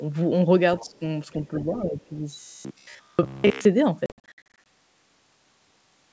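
Other side's voice leaking through, from 0.79 to 0.99 s: a faint second voice sits about 25 dB below the speech for a fifth of a second. This is likely residual echo: the far end played over the talker's loudspeaker, reached the microphone, and the echo canceller did not fully remove it. The leaked voice comes through as a brief scrap under the main talker.

Speech suppressed in double talk, from 0.86 to 1.02 s and again from 1.5 to 2.12 s: the talker's level sinks by up to about 15 dB in the first stretch and about 10 dB in the second. The cause is likely the echo canceller's suppressor. With both sides active, it could not separate the near voice from the echo and pulled both down. The speech dips and thins in short pieces.

Robotic sound from repeated short buffers, from 2.41 to 3.65 s: the speech turns into a rigid, metallic buzz at 66.8 Hz while still loosely following the talker. 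That pitch matches a repeat period of about 15 ms. Fresh audio was likely arriving too rarely, so most of this stretch is the last short buffer replayed over and over in place of the real signal.

Packet loss on an ADPCM call, from 4.06 to 4.65 s: 340 ms of audio drop out, scattered across 600 ms as hard-edged holes. The longest single gap is 60 ms, and around fifteen packets are missing. Each gap is filled with silence, and the G.722 decoder's adaptive predictor and step size drift away from the sender's. When speech resumes after each hole, it comes back slightly distorted until the decoder resynchronises.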